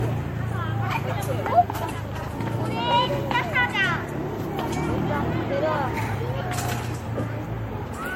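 Throughout, generation loss: swirly, hollow sound with blurred attacks, likely from about four MP3 passes near 64 kbit/s. The spectrogram shows holes and nothing above 16.5 kHz.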